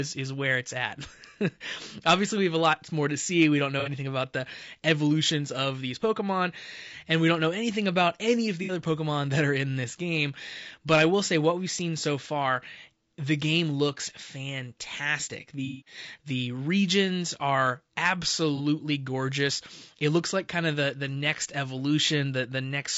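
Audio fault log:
throughout, low-delay AAC compression: the speech has a rough, grainy texture, with noise filling the gaps between harmonics and a thin, somewhat synthetic top end. That's likely low-delay AAC, whose short frames resolve pitch poorly at a bitrate around 32 kbps.
3.80–3.89 s, 8.63–8.72 s, 15.65–15.98 s, 18.56–18.60 s, AAC frame loss with concealment: short smeared, noisy patches where the decoder lost frames and filled in from the last good spectrum. Each gap is about 30–60 ms, except the one near 15.7 s, which runs about 210 ms.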